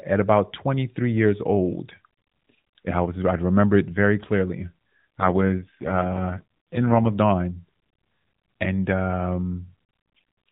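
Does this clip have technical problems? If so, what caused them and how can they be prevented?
Yes. An AMR rate drop from 5.20 to 7.08 s: the link forced the mobile codec to a lower rate, so the sound turns buzzier and synthetic, consistent with 12.2 falling to 4.75 kbps. A stronger radio link or better coverage would prevent it.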